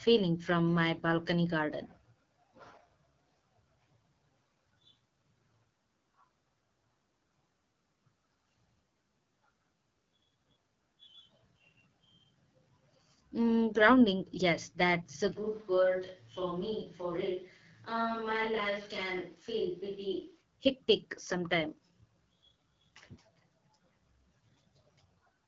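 Throughout the speech, the sound carries the AMR wideband (HD Voice) codec at 8.85 kbit/s, one of its two lowest rates, so the damage is plainly audible: consonants and vowels take on a rough, raspy grain as the pulse-driven vocal tract model runs short of bits. Nothing lies above about 7.2 kHz, and the top band is filled with shaped noise rather than real detail. That extension past 3.4 kHz, together with the rasp, separates this from a narrowband phone codec, which would sound muffled rather than grainy.

From 15.37 s to 20.40 s the sound abruptly turns roomy and hollow, thinner in the bass and about 5 dB quieter, with room noise rising to roughly 35 dB below the speech. This points to a switch to a distant microphone, likely because the close microphone dropped out and a farther one took over. The change in and back is instant. Added reverberation or a simple gain drop would not bring in the extra background noise.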